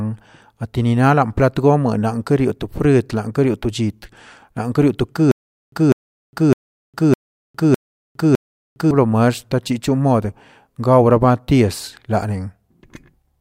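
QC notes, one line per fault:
5.31–8.91 s, stutter with silent gaps: a 199 ms burst repeats six times with 409 ms of silence between, likely a stalled stream replaying one fragment.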